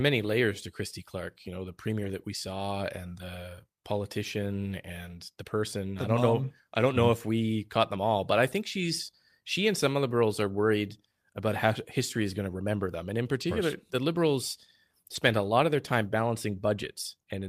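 At 1.99 to 2.09 s, then 3.21, 6.79, 13.41 and 15.15 s, lost packets were rebuilt from error correction: low-bitrate copies fill the gaps, giving brief rough, noisy patches.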